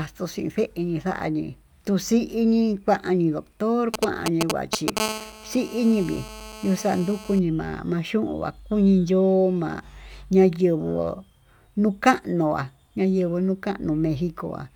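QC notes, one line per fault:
3.94–4.99 s: GSM signalling bursts. A nearby 2G phone emits brief groups of radio bursts at about 217 Hz, which the audio circuitry rectifies into galloping ticks and short buzzes at roughly the same level as the speech. On a spectrogram these appear as clustered vertical stripes with 217 Hz harmonic stacks, and the waveform shows gated pulse trains.
5.00–7.39 s: GSM phone buzz. The phone is now in a call and transmits continuously at 217 bursts per second. Rectification of those pulses produces a hard, raspy buzz sitting about 13 dB below the speech. A spectrogram shows evenly spaced horizontal harmonic lines from 217 Hz upward. The waveform carries a regular pulse pattern unrelated to the speech.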